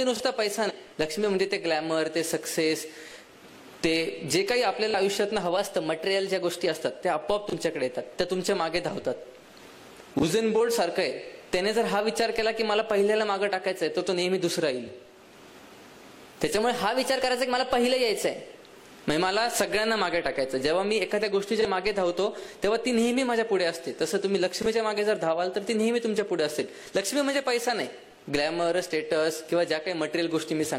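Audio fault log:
0.65–0.72 s, damaged data in a compressed stream: a short glitch lasting about 64 ms interrupts the sound. Corrupted bytes make the decoder misread those frames and lose sync until it finds the next valid frame header. On a spectrogram it shows as a narrow vertical seam where the sound breaks. The waveform shows a visible seam where normal signal resumes.
5.57–6.68 s, 10.10–10.61 s and 16.58–18.53 s, drift correction step: speed and pitch shift together. In the first and third spans, playback runs about 6% fast and pitch rises about 101 cents. The middle span runs about 6% slow, dropping about 107 cents, roughly a semitone each time. The likely cause is clock-matching software changing the playback rate in one step to balance its buffer. Spectrogram harmonics jump up or down as a block at each boundary. The waveform looks compressed or stretched in time there.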